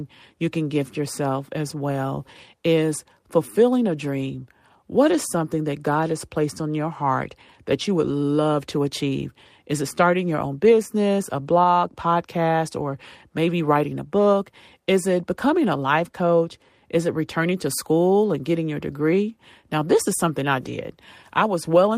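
No technical faults can be heard anywhere in the recording.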